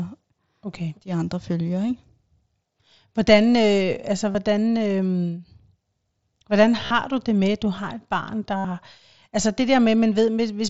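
At 4.32, 6.86 and 8.57 s the speech shows concealed Bluetooth headset packet loss: lost headset packets were patched by repeating the last waveform stretch. Unlike silent dropouts, the gaps (about 23, 45 and 75 ms) become a buzzy, full-level tone that grows with length.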